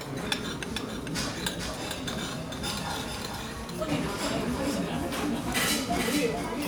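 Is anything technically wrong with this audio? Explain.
Yes, there is a doubled audio track throughout. Every event is followed by a second, full-band copy roughly 400 ms later and about 5 dB quieter, with no decay or room colouring, so it sounds like a crisp, flat repeat rather than an echo. This likely comes from the audio being captured twice, once through a slower path. On a waveform, each transient has a smaller identical twin at a fixed offset. A spectrogram shows each pattern repeated, slightly fainter, the same distance to the right.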